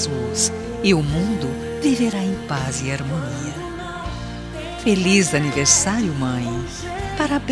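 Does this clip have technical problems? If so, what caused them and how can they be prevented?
No, the signal stays intact and steady throughout, with nothing in it that points to a recording, transmission or playback problem, so there is nothing here that needs preventing.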